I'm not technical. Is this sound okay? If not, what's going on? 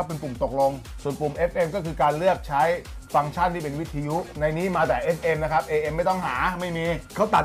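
Yes, nothing wrong here.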